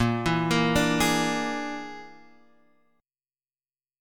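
No technical faults can be heard anywhere in the audio.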